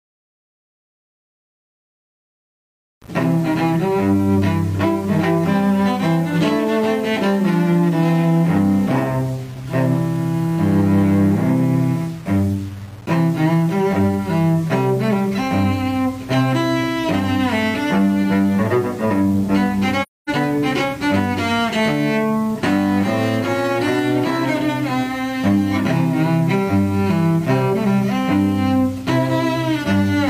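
Throughout the audio there is grainy distortion that tracks the signal, with error sitting roughly 30 dB below it, likely from low bit depth without dither, consistent with rounding to about 6 bits. From 20.02 to 20.30 s the sound fades out and back in, leaving a soft-edged hole of about 256 ms. This is AAC frame loss with muting: the decoder zeroed the missing frames, and the overlapping windows smoothed the edges, which fits a run of about six lost frames.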